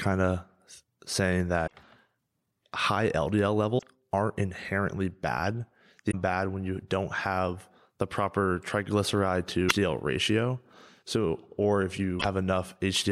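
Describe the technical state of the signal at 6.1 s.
From 6.08 to 6.15 s, just after "aren't inherently bad", damaged data in the compressed stream makes the decoder lose frame sync, producing a brief chirp, squawk, click or short hole.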